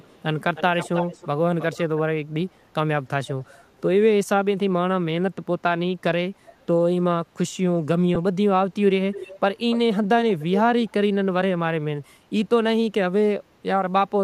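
It's a speech clip with an echo leak: a delayed copy of the talker comes back at 0.0 to 0.19, 0.55 to 1.27, 1.6 to 1.78, 3.26 to 3.81, 9.13 to 9.39, 9.7 to 9.99 and 10.19 to 10.61 s. The delay runs from about 340 ms at the start to around 310 ms and then 290 ms. The echo ranges from barely there to nearly as loud as the speech by 10.2 s, likely a far-end speakerphone whose echo canceller isn't catching everything. There's also one lost LE Audio frame at 8.15 s, a 10 ms gap the LC3 decoder papered over by reusing the last spectrum with random signs instead of real signal.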